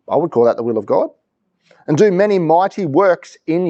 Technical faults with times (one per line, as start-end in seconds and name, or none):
none